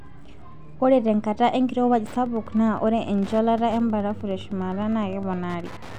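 From 1.91 s to the end of the clip, the speech carries Wi-Fi interference: a steady ticking at just under ten clicks per second, sitting roughly 20 dB below the speech. A nearby Wi-Fi radio is transmitting its beacon every 102.4 ms, and some stage of the audio circuit rectifies that radio-frequency burst, turning each one into an audible click. The spacing is fixed, so the ticks form an even, mechanical rhythm.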